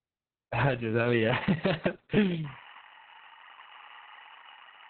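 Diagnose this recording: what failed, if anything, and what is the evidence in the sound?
Muffled, hoarse, slightly robotic speech throughout, with nothing above 4.5 kHz. This is Opus voice compression at the codec stage, SILK coding narrowband at what sounds like a very low bitrate.

From 2.44 s to the end, a steady chirping warble alternates near 1 and 2 kHz, about 20 dB under the speech. This is timecode bleed, linear timecode leaking in through analogue wiring.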